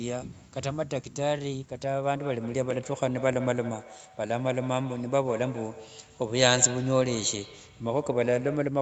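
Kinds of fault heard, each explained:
Feedback echo between two devices: from 2.14 s onward, the speech comes back at a steady interval of roughly 150 ms, peaking about 13 dB below the direct sound, as another device's loudspeaker feeds this microphone. Unlike room reverberation, each return is a distinct, regularly spaced copy.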